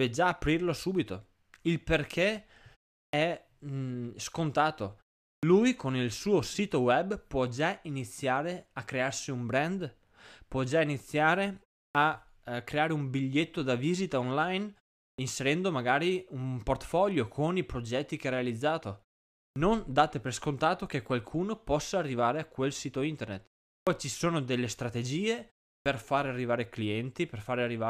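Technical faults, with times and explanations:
3.09, 5.39, 11.91, 15.14, 19.52, 23.83 and 25.82 s: clipped start after a pause. After each 0.34 to 0.56 s gap, the output takes 38 to 45 ms to wake up, so "eh creare un biglietto" and "ci sono delle strategie" pop in missing their first sounds.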